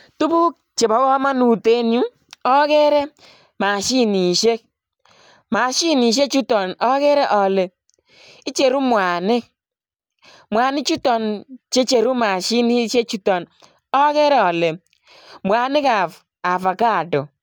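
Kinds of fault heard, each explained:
No technical faults are audible anywhere in this speech recording, and the signal holds together without interruption or disturbance.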